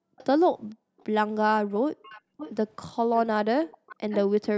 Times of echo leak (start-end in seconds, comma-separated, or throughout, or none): 0.18-0.26, 0.98-1.05, 2.00-2.52, 3.13-4.19